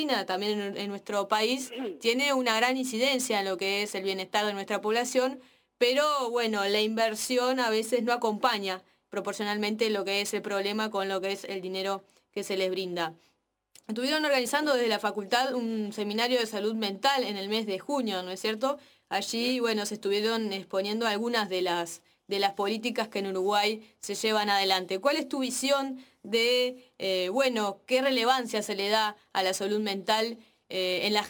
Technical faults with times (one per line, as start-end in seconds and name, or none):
0.00-31.29 sample clock jitter